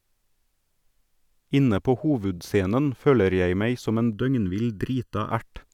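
From 4.13 to 5.31 s, just after "jeg meg som en", channel delay (comb filtering) sets in. One channel lags the other by well under a millisecond before the mono sum, cancelling evenly spaced bands from around 700 Hz upward, so the speech turns hollow and phasey.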